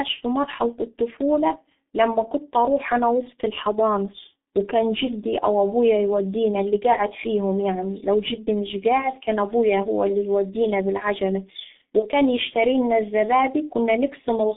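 From start to end, the speech carries heavy G.723.1 codec damage. The band runs only from about 200 Hz to 3.6 kHz. Voices sound muffled and hoarse. Consonants smear together. The coarse, slowly updated voice model fits the 6.3 kbit/s mode.

At 11.99 s, just after "هو اللي يودينا بالعجلة", VoIP packet loss concealed by the speech codec appears. The decoder stretches the last sound into a fading buzzy tone or coloured noise until 12.06 s. The gap fits one lost 30 ms frame, rebuilt from old pitch and filter.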